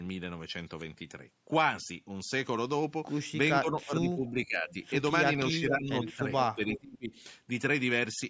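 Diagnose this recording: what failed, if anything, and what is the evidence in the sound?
The speech is being suppressed in double talk at the call-processing stage, most likely by the echo canceller on the talker's own loudspeaker side. The level sags at 3.61 to 4.69 s, 5.52 to 5.94 s, 6.14 to 6.24 s and 6.55 to 7.12 s, by roughly 10 to 15 dB and close to 30 dB in the last stretch. The waveform envelope caves in and the spectrogram thins across the band, up to its normal 8 kHz ceiling, while the other side is talking.

Echo leak, also in call processing, lets a delayed copy of the speech back through. It appears at 4.7 to 4.88 s, 6.03 to 6.14 s, 6.4 to 6.46 s and 6.68 to 6.79 s, about 460 to 474 ms behind the original. It starts at about 25 dB below the speech and grows to about 10 dB below it. On a spectrogram it shows as short repeats of earlier harmonic patterns. The likely cause is a loudspeaker path the canceller did not fully remove.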